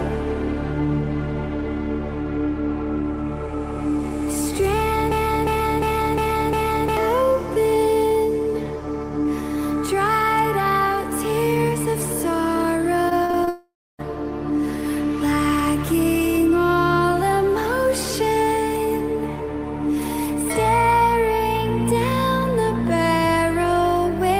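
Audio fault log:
5.12–6.97 s, broken-record loop: a fragment of about 0.35 s plays five times in a row, back to back and identical each time, so the sound stutters in place for nearly two seconds instead of moving on. This is likely a stall in the player, encoder or stream that kept re-sending the last fragment it held. Whatever should have been heard in that interval is gone, and the audio resumes from a later point.
13.09–13.49 s, repeated packet loss (robotic sound): four short holes open within about 0.4 s, the longest about 43 ms, together around 100 ms of missing audio. Each is patched by extending the preceding sound, covering roughly a quarter of the stretch, so the passage turns choppy, with small pieces absent between the patched segments.
13.49–14.01 s, long network dropout: immediately after, about half a second of audio fails to arrive. The receiver carries the last sound forward as a decaying buzz or hiss, and after that fades roughly 0.28 s is left as silence or low steady noise before the audio returns further along. 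The likely cause is an interruption in the network path, and the missing half-second is not recovered.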